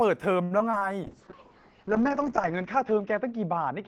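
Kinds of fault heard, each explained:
Repeated packet loss (robotic sound): Between 0.43 and 0.83 s the speech breaks up in a quick run of short holes, the longest about 73 ms. Each gap is bridged by stretching the sound just before it, so roughly a third of that stretch is patched rather than real, giving a choppy sound with pieces missing. Unlike a single dropout, the holes come back-to-back, and unlike a bitrate drop the tone between holes stays full and bright.
Call bitrate drop: From 1.04 s to the end, the speech turns coarse and watery, and the top end is cut off at about 8 kHz, where it had reached 20 kHz before. That points to the encoder falling from around 32 kbps to about 7 kbps, holding its lowest rate for about 1.4 s. Unlike packet loss, nothing goes missing and the sound stays continuous. It is degraded throughout rather than chopped.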